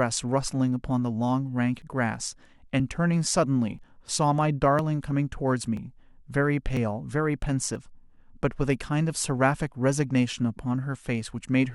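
Small skips fall at 1.82, 3.79, 4.79, 5.77, 6.77 and 7.76 s. This is overlap between stream segments. The 1 s segments have overlapping time stamps. The player trims 6 to 19 milliseconds of real speech. The waveform jumps, so each is a tiny skip.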